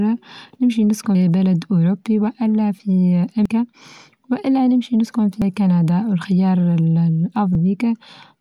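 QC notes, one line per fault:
1.15, 3.46, 5.42 and 7.55 s: damaged data in a compressed stream. Each is a brief glitch, the first just after "نمشي نسكن". The decoder misreads a corrupted frame, loses sync and hunts for the next header. Unlike a plain dropout, the fault lies in the compressed data itself.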